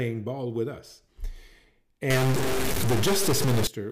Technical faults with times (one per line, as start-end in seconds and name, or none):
2.10-3.67 stuck bit